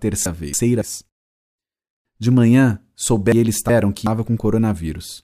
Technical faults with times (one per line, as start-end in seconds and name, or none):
0.26-0.82 frames out of order
3.32-4.07 frames out of order